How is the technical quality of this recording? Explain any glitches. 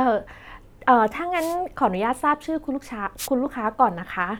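Two wireless microphone noise hits break into this speech recording, from 1.35 to 1.56 s and from 3.17 to 3.28 s. Each time, the analogue FM radio link fades as reflected signals cancel at the receiver, so receiver hiss surges over the voice for roughly a fifth and a tenth of a second. Unlike a digital dropout, which leaves silence or a repeated fragment, these sound like brief swishes of static layered over the speech.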